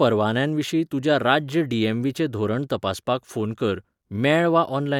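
Listening through this short piece of speech, nothing stood out as a technical problem.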